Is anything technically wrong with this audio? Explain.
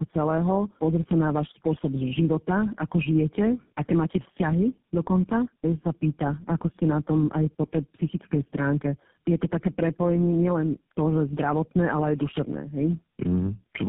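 Yes. Tandem speech coding runs throughout: the speech sounds recoded by about four low-rate codecs in a row, each compounding the last's damage, leaving it rough, muffled and warbly, with nothing above 3.7 kHz.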